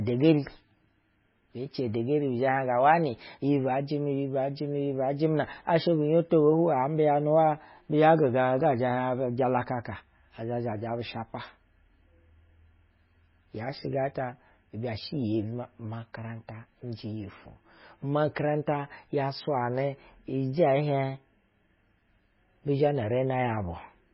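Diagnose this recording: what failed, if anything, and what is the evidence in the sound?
The codec stage is at fault: the speech is likely damaged by MP3 compression, heavily and for the whole clip. Nothing reaches above 5.5 kHz, so sibilants sound dull and lisping, and the voice has a watery, swirling texture. The encoder, starved of bits in a way that fits a bitrate near 16 kbps, cuts the treble at a fixed point and zeroes weak frequency lines that flicker between frames. A spectrogram would show a flat ceiling at 5.5 kHz and holes scattered across the spectrum below it.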